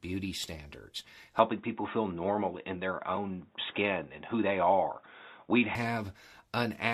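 At 1.39 s the speech turns dull and boxy, most likely because the input switched to a poorer device. The bandwidth collapses, with nothing left above 3.8 kHz. The level shifts by roughly 5 dB, and a new, faint background noise appears, sitting around 40 dB under the speech. There is no gap at the changeover. At 5.75 s the original input returns, and the full top end and the earlier noise character come back just as abruptly.

At 3.16 s, within that narrowband stretch, there is a brief smeared, noisy blip. This is AAC frame loss with concealment. About 10 ms of audio went missing, which fits a single low-delay frame, and the decoder filled the hole from the preceding spectrum rather than leaving silence. It sits against the light graininess that the low-delay AAC coding likely adds throughout.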